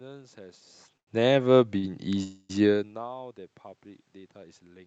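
At 0.97 to 1.21 s there is a short stall from a late packet. The jitter buffer ran dry, so the last sound is held for about 98 ms with a slight buzz or dip. It happens again at 1.78 to 1.85 s, held about 52 ms. Nothing is lost.

From 2.23 to 2.51 s the speech stops and a buzzy or hissy continuation fills about 261 ms. It fades without reaching silence. This is a call audio freeze, likely from packets held up in transit. The speech then resumes where it stopped.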